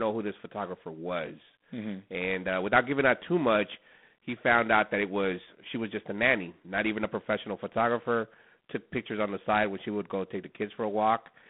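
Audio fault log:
Throughout: G.726 ADPCM coding. The speech sits in a narrow telephone band from 150 Hz to 3.5 kHz. Nothing passes above 3.8 kHz. A harsh, rasping hiss rides on the speech and rises and falls with its level. The codec sends only a few bits per sample for the gap between each sample and a running prediction. Too few bits leave coarse steps, and those steps are this noise. The plainly audible damage fits 24 kbit/s operation.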